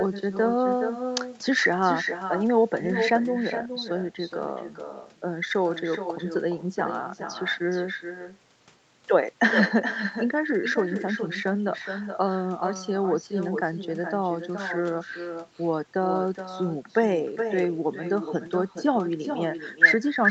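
Speech recorded over a call where the far end played the audio on a loudspeaker and no echo canceller removed it, so echo with no canceller runs through the whole clip: every phrase is trailed, around 0.4 s later, by a thinner copy about 8 dB quieter, beneath a band that stops near 8 kHz.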